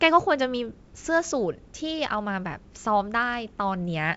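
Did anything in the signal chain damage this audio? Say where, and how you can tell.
No, nothing in the chain damaged this speech. It has passed through G.722 wideband telephone coding at what sounds like 64 kbit/s, so the sound stops at about 7.7 kHz, and any trace of the coder's upper-band hiss is faint at most.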